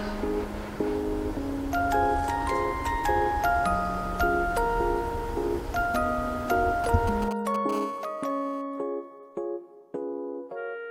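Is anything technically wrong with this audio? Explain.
Yes. Two kinds of mobile-phone interference appear near the end.

From 6.84 to 7.71 s there are GSM signalling bursts. A 2G phone nearby is sending short groups of radio bursts, as a handset does before a call connects. The audio circuit rectifies those pulses into sound. You hear a galloping dit-dit-dit of short buzzes at 217 Hz. They sit roughly 10 dB below the wanted audio.

From 7.73 to 8.62 s the pattern changes to a continuous GSM phone buzz. The phone is now transmitting steadily, as during a call, with bursts 217 times a second. The circuit rectifies this pulse train into a hard, raspy 217 Hz buzz with many harmonics. It is steady and has nothing to do with the audio itself. It sits about 19 dB below the signal.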